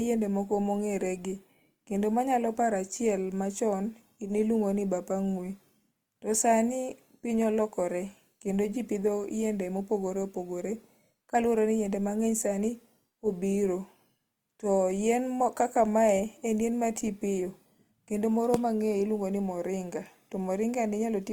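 Throughout the speech, the signal has likely passed through Opus compression at a low bitrate, with the grainy texture pointing to the music-oriented CELT mode at roughly 24 kbps. Short of bits, the encoder preserves each band's energy but fills in detail with folded or noise-like content. The damage is plainly audible as a rough, gritty sheen on the speech. Bandwidth stays full, reaching 20.1 kHz.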